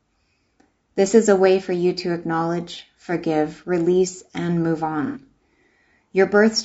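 All the way through, the speech has a rough, grainy edge, with a hiss sitting between the harmonics and a top end that sounds thin and a bit synthetic. That's low-delay AAC compression, likely AAC-ELD at something like 32 kbps, where short frames struggle to resolve pitch and the damage comes through plainly.

Then from 5.06 to 5.20 s there's a smeared, noisy patch of about 90 ms. That's AAC frame loss with concealment: a few frames went missing and the decoder papered over them by reusing the last good spectrum, so the detail blurs into phasey mush.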